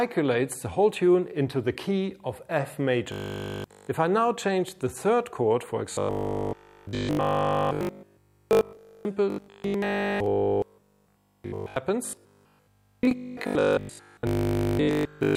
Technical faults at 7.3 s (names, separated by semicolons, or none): robotic sound from repeated short buffers